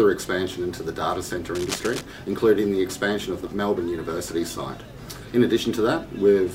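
A burst of scratching, rustling noise sits over the audio from 1.55 to 2.03 s, a dense, uneven crackle lasting about half a second and only around 10 dB below the main signal. This is cable scratch noise, likely from a worn cable, connector or control being moved, with its contact resistance jumping around rapidly and adding these irregular noise bursts while the contact was disturbed.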